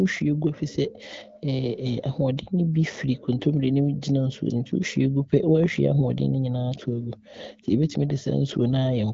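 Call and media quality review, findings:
No faults found in this clip.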